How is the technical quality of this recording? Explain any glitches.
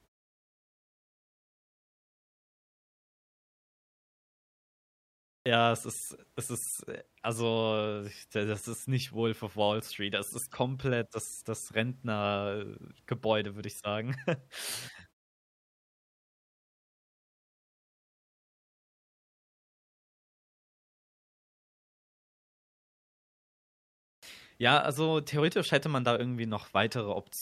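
The recording has two clipped starts after a pause, where speech begins abruptly with its opening sounds missing. At 5.41 to 5.46 s, after about 5.4 s of silence, roughly 48 ms is lost before "es ist es ist". At 24.18 to 24.23 s, after a 9.1 s pause, about 46 ms vanishes. The output device drops into a low-power state during long silences and needs a moment to wake and lock again, so the first instant of sound is swallowed.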